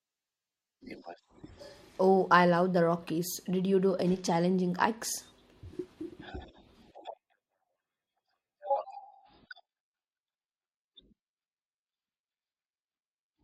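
At 9.00 s the adaptive stream switches to a lower bitrate, likely because the connection slowed, and stays there to the end. The speech abruptly picks up stronger codec artefacts, which fits a drop to around 16 kbit/s, with no gap.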